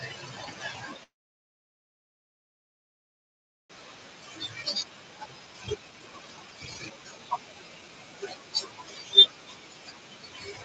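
The noise suppressor runs across the whole clip, and you can hear its artifacts throughout. It pulls down bands it decides are steady noise, frame by frame, so the background dips between phrases and swells back under the speech.

That same suppressor is also cutting into the speech itself from start to finish. It's mistaking softer parts of the talker for noise, so quiet consonants and word endings get pushed down with the background, at worst by about 12 dB, and they come across swallowed or faint.

From 1.03 to 3.72 s there's a call audio freeze. Audio stops, trails off almost at once, and sits silent for about 2.6 s before picking up right where it left off. Nothing is lost, it's just a gap. The likely cause is delayed packets leaving the jitter buffer empty.

Right after, at about 3.78 to 3.88 s, there's a skip ahead. Roughly a second and a half of speech is gone, and playback jumps straight to later audio with almost no gap. 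The two sides are butted together, which is what you'd expect when a backlog gets dropped to catch up.

From 4.34 to 7.89 s the jitter buffer speed-up kicks in. The receiver is shaving out tiny pitch-period slices over and over to trim excess delay, about a second in total. The speech plays at roughly 129% speed with the pitch unchanged, so it sounds noticeably rushed. Around 7 s the room noise also rises by about 18 dB, though that's the room itself and not a system fault. Nothing comes through above 8 kHz, which fits Opus running at wideband.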